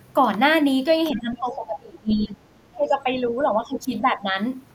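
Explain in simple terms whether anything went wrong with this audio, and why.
Something did go wrong: the speech repeatedly sinks, from 1.11 to 2.36 s, 2.68 to 3.16 s and 3.41 to 4.28 s. This is speech suppressed in double talk, likely from an echo canceller that heard both sides at once and turned everything down. The first two dips go deep, and the last is milder.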